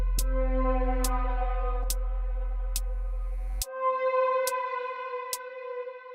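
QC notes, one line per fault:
Nothing here needs flagging; the audio sounds fine all the way through.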